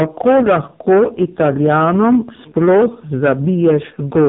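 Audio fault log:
throughout, hard clipping: The speech is driven about 12 dB past what the stage can pass. Roughly a tenth of the samples hit the ceiling and are cut flat. Those flat tops add high harmonics, so every loud syllable carries a harsh, gritty fuzz.
throughout, AMR narrowband mobile codec: Nothing above 3.8 kHz survives, so the voice sounds thin and boxed in. The codec rebuilds speech from a vocal-tract model and a few pulses. Damage is heavy, giving a buzzy, synthetic tone that fits AMR-NB's low 5.15 kbps mode.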